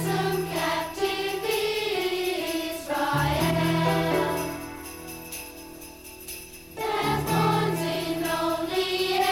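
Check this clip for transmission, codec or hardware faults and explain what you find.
No faults found.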